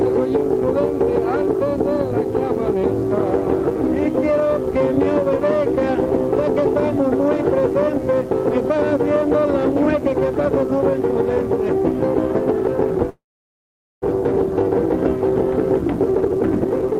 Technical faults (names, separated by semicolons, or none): mains buzz; call audio freeze; jitter buffer speed-up